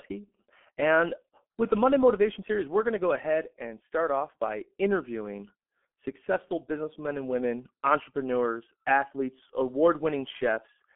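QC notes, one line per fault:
Throughout, G.723.1 codec: nothing above 3.8 kHz and a slow, coarse voice model leave the speech muffled and hoarse with smeared consonants, consistent with about 6.3 kbit/s.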